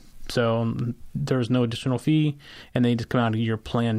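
Nothing technical goes wrong anywhere in this bit of speech, so there's no fault to point to at any moment.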